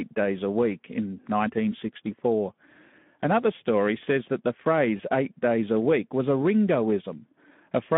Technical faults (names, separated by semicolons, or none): Speex codec; VoIP packet loss concealed by the speech codec